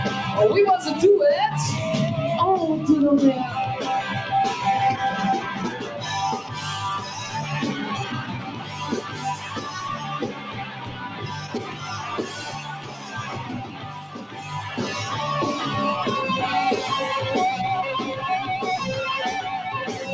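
A noise suppressor applied to music or sounds runs across the whole clip. Processing tuned for speech treats sustained and ambient material as noise, so the level keeps swinging by around 10 dB as it clamps down and releases. Transients get through while held sound and decays sink, giving a pumping, thinning character. The call microphone path passes nothing above 8 kHz, which is expected for that path.

Sound cut by the noise suppressor shows up as distinct dips. The first two are short, near 6.4 to 6.57 s (deepest drop about 6 dB) and 7.0 to 7.17 s (about 4 dB), each a brief sag. Longer attenuation follows at 8.22 to 9.72 s, 9.96 to 12.05 s and 12.27 to 13.34 s, each about 8 dB at its deepest, then 13.64 to 14.52 s at about 9 dB. In these spans the steady sound and its tails fall away while onsets stay prominent.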